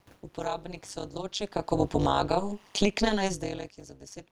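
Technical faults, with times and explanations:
Throughout, overlap-add ripple: the speech swells and collapses in level around 200 times a second, with the dips reaching about 60 dB deep, giving a harsh, buzzy, robotic buzz. The frames were rejoined with overlapping windows whose gains do not add up to a constant, so every frame boundary leaves a gap in level. Its steady, fast rate sets it apart from the slow, occasional level shifts near 1.5 s and 3.0 s, where the talker moved.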